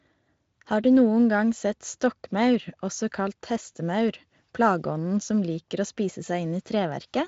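Nothing in this recording stands out as a technical fault, so there's really nothing here to flag.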